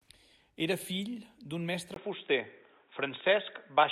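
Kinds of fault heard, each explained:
Input switched to a poorer device: At 1.94 s the speech drops out for about 20 ms, then returns dull and boxy, with nothing above 3.8 kHz. The level shifts by a few decibels and a faint new noise floor appears. This is likely a change to a narrower-band microphone.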